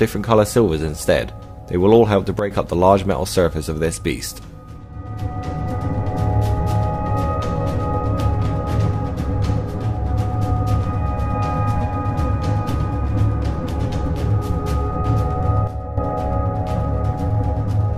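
A digital gain setting was likely applied from one sample to the next without a ramp. The result is a sudden gain jump at 2.39 s, where the level drops by about 10 dB until 2.51 s, and again from 15.67 to 15.98 s, a drop of about 9 dB. Each time the sound and its background noise fall together in a single step, then come back abruptly.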